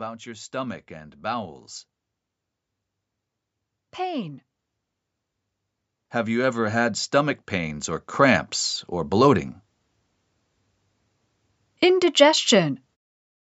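From 0.23 to 1.72 s, and again from 6.24 to 8.54 s just before "or bloating", voice and background swell together, by about 4 dB then about 9 dB: automatic gain rising, as the control lifts its gain on quiet input.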